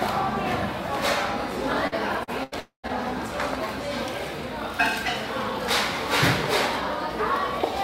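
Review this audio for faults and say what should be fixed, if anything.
From 1.87 to 2.92 s the sound turns choppy, the mark of repeated packet loss (robotic sound). Four separate gaps open in that stretch, the longest 82 ms. About 160 ms of audio is missing in total, and 176 ms is patched by stretching the last sound, which covers roughly 17% of the span. Several short holes close together set it apart from a single long dropout. A larger jitter buffer with forward error correction would prevent it.

Inside that stretch, from 2.60 to 2.86 s, the sound drops out for longer. About 240 ms never arrives, and the last sound is carried on as a buzz that fades into roughly 120 ms of silence before the audio returns further on. A long network dropout is the likely cause. One continuous gap that sinks into silence, rather than rapid choppy patches, separates it from the packet loss around it. A steadier connection or redundant transmission would prevent it.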